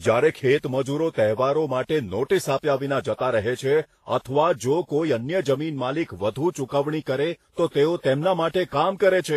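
Across the whole recording, the speech carries two layers of codec damage at once. The different artefacts of both codecs are heard together, and the top end stops at the lowest cut-off in the chain. The cause is likely transcoding between lossy codecs. The sound points to a low-rate Vorbis encode near 34 kbit/s, re-encoded as WMA near 64 kbit/s. The second codec spent bits preserving the first one's artefacts while adding its own.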